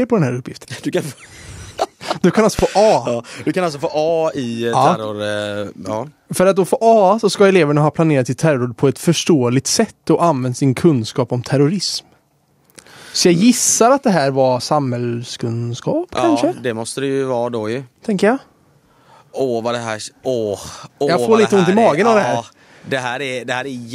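Right after "du kan alltså", at about 2.59 to 2.62 s, there's a single loud pop sitting well above the speech. It's likely a sudden voltage spike, say from a switch, static or a driver glitch, that got shaped into a sharp thump while the talking carries straight on underneath.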